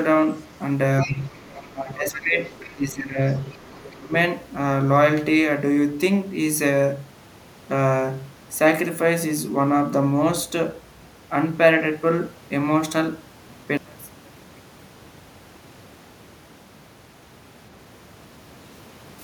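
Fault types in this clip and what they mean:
Other side's voice leaking through: A second, quieter voice sits under the talker's speech at 1.01–1.72 s, 2.14–2.23 s, 2.45–2.74 s and 3.36–3.95 s, roughly 15 to 25 dB below the main speech. It is most audible early and fades over the later recurrences. The likely cause is the far end playing from the talker's loudspeaker and being picked up by the microphone, with the echo canceller leaving a residual it failed to subtract.
Speech suppressed in double talk: The talker's speech dips repeatedly during the same early stretch, at 1.04–1.34 s, 1.73–2.38 s, 2.73–3.21 s and 3.95–4.14 s. The drops run from about 10 dB in the first dip to about 20 dB in the last. They coincide with or border the leaked voice. This is likely the echo canceller meeting simultaneous talk from both ends, failing to tell near speech from echo, and attenuating everything.
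One channel inverted: From 13.77 s to 17.23 s the speech nearly disappears, falling by about 30 dB and leaving only a faint trace. This is the signature of centred content cancelling in a mono sum. It likely comes from one stereo channel having reversed polarity over that span, so the near-identical left and right signals subtract and only their small difference remains audible.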